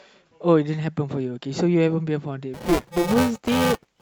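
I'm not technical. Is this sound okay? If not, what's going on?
No. From 2.54 s to the end, the speech gets a robotic buzz at 345 Hz. This is buffer tearing: about a fifth of each tiny chunk replays audio from a moment earlier.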